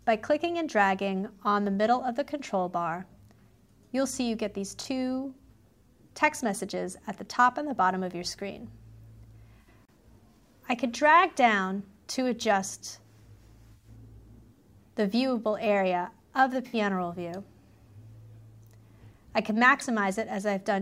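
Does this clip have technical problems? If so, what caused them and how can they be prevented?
Yes. AAC frame loss with concealment occurs at 4.81 to 4.86, 9.61 to 9.68, 13.72 to 13.89 and 16.67 to 16.74 s. The decoder rebuilds each gap from the last good spectrum, leaving short smeared, noisy patches. Reliable transport or forward error correction would prevent it.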